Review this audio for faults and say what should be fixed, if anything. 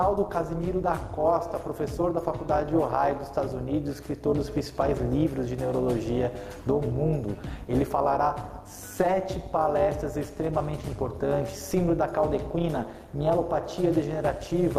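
Overlap-add ripple throughout: frames were rejoined with an overlap that doesn't sum to constant gain, so level dips about 11 dB roughly 200 times a second, a metallic buzz. To prevent it, use a window and hop size whose overlapped windows sum to a constant gain.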